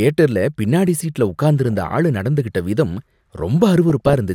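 DAB burbling at 1.71–1.81 s and 3.90–4.14 s: uncorrected bit errors make single sub-bands jump in level, putting short blips of noise over the speech without leaving the gaps a dropout would.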